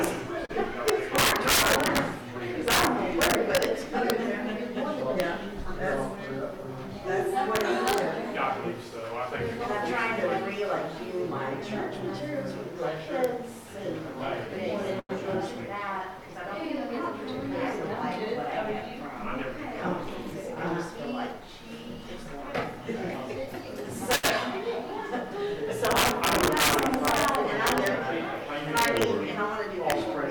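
The whole recording has integer overflow: the level is pushed roughly 11 dB past full scale, and instead of being limited, the loudest peaks wrap to the opposite sign. Only a small fraction of samples, around half a percent, go over, but each one produces a harsh crack on loud moments that is much nastier than ordinary clipping. There are also three short stalls from late packets. The jitter buffer ran dry and the last bit of sound was held until the data showed up, at 0.45 to 0.51 s (37 ms of fill), 15.00 to 15.11 s (96 ms) and 24.15 to 24.25 s (77 ms). Nothing is lost, but each one leaves a brief held spot. From 20.10 to 21.49 s there's a jitter buffer speed-up. The receiver cut tiny pitch-period slices to work off excess delay, trimming something like 70 ms in total, so the audio runs about 4% fast at unchanged pitch.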